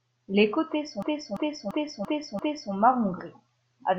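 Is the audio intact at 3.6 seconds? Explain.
Yes, at 3.6 seconds the speech plays through intact, with no dropout, click, distortion or other fault at that point.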